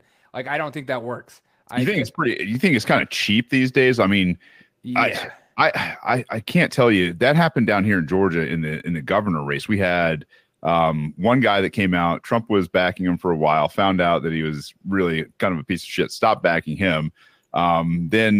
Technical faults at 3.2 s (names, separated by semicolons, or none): none